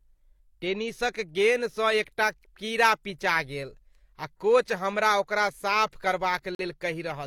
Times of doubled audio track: none

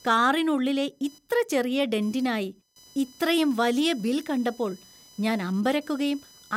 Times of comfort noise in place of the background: none

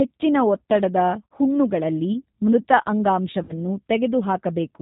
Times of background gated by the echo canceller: none

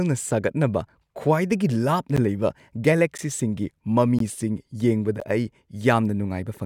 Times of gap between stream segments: 1.14, 2.16, 3.17, 4.19, 5.20

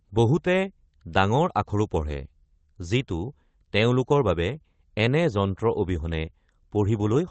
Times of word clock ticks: none

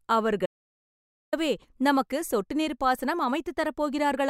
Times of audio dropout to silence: 0.46-1.33

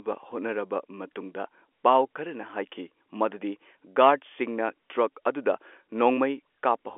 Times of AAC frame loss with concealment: none

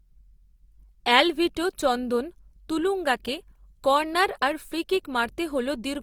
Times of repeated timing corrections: none

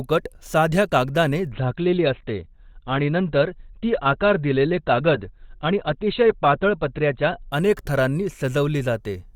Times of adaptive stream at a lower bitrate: 1.52-7.52

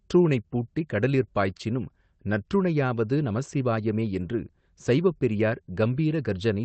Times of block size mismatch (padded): none

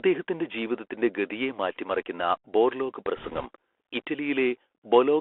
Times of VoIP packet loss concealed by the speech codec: none

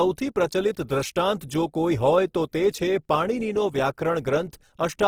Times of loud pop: none

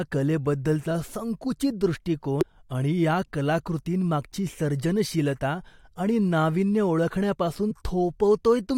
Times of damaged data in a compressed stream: 2.41-2.43, 7.70

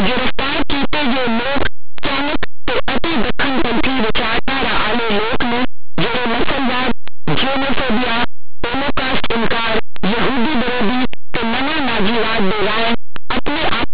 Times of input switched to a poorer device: none

